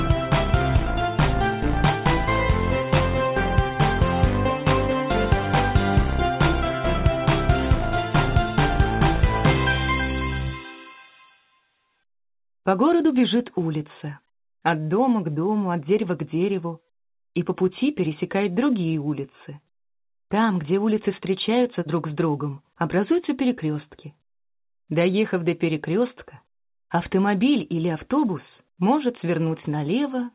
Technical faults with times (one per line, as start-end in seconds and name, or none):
none